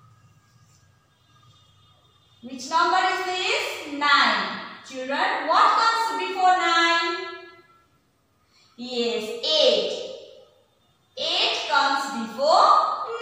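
Nothing stood out as a technical fault at any point on listening.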